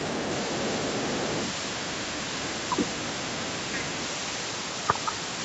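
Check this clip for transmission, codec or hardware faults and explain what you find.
Two faults stand out in this speech clip: a faint second voice behind the talker, and two short dips in the talker's level.

The other side's voice leaking through occurs from 0.0 to 1.74 s, 1.9 to 2.34 s, 2.51 to 2.6 s and 2.89 to 4.06 s. It sits roughly 30 to 40 dB under the talker, likely loudspeaker echo the canceller missed. Unlike crosstalk or background noise, it is a separate voice that tracks the far end.

Speech is suppressed in double talk from 2.43 to 2.5 s and 2.69 to 2.88 s, dropping by about 15 dB and then about 25 dB. This is likely the canceller ducking both voices while they overlap. Unlike packet loss, the voice dips in level, and in the gaps between the stretches of leak.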